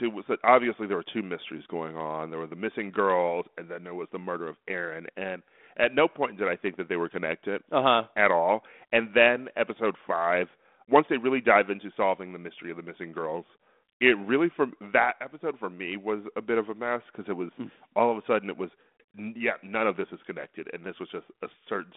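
No technical faults can be heard anywhere in the recording. It arrives over a G.726 ADPCM path at 32 kbit/s, which confines the sound to a 200 Hz to 3.5 kHz telephone band and leaves only a light coding grain on it.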